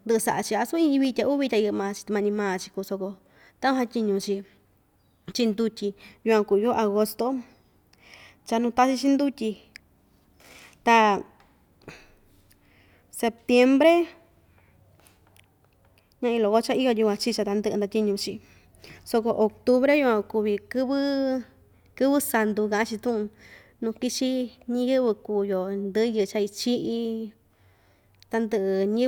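Nothing in the speech stood out as a technical problem on listening.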